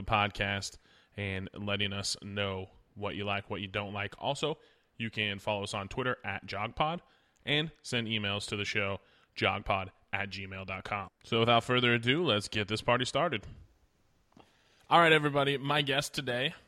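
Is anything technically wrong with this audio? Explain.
No, nothing technically wrong stood out on listening to this speech recording.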